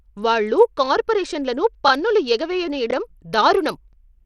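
From the start, the speech carries plainly audible codec damage, likely Bluetooth SBC compression: the top bands thin out and flicker, with gritty noise and aliasing. That pattern points to a starved bit pool, which fits a bitrate near 80 kbps.

Overlapping chunks appear at 2.91–2.93 s and again at 3.93–3.95 s. At each join, about 23 ms of audio is played twice because the next chunk starts before the previous one finished. With 1 s chunks, this produces a regularly spaced click-like stutter.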